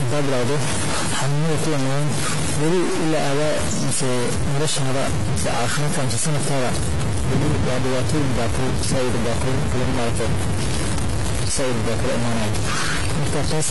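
A stuck bit runs through the whole of this speech recording. It gives a distortion because one data bit likely holds a fixed value, shifting about half the samples by its weight and filling the pauses with noise. AAC compression, also present throughout, is plainly audible. The speech sounds dull and smeared, with fizzy, warbling sibilants, and nothing remains above 11.5 kHz. That fits a low-bitrate AAC-LC encode, likely around 32 kbps, where the coder discards high bands and coarsely quantises the rest.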